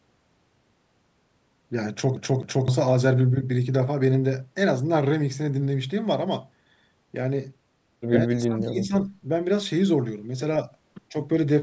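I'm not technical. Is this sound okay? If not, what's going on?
No. There are two problems in this speech recording.

The first is a CD stuck on one turn. A scratch on the disc kept knocking the laser back to the same spot, so from 2.16 to 2.68 s the same quarter-second stretch of audio (about 258 ms) plays twice in a row, with a tiny gap at each jump. It sounds like a fast, even stutter, the familiar hiccup of a skipping CD.

The second is speech suppressed in double talk, most likely caused by the call's echo canceller. When both people on a call talk at once, that canceller can confuse the talker's voice with echo from the loudspeaker and turn it down. Between 8.27 and 8.94 s, the voice drops sharply for about half a second, nearly vanishing. A much smaller, brief dip follows from 11.10 to 11.15 s.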